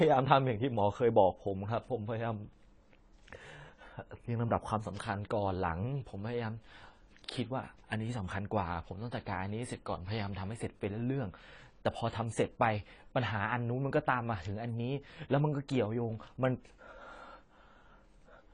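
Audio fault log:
Throughout, AAC compression: the speech sounds dull and smeared, with nothing at all above 10 kHz and a warbly, fizzy edge on sibilants. That's likely low-bitrate AAC-LC coarsely quantising the spectrum and dropping the top band, which fits something around 24 kbps.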